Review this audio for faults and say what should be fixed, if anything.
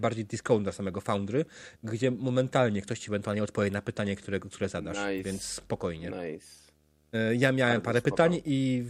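A low, steady buzz with a gritty hash riding above it sits under the speech from start to finish, well down in level at roughly 40 dB below the voice. This is video or display buzz: a screen or video cable is coupling into the audio path, and the buzz repeats at 75 Hz, the display's field rate, with the hash coming from the sharper edges of the picture signal. Keep audio cables and interfaces away from monitors and video leads, and use balanced, shielded connections.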